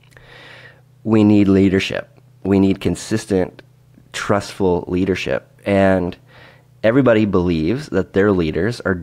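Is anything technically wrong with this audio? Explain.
No, nothing technically wrong can be heard in this speech recording. There is no technical fault to point to anywhere in the audio.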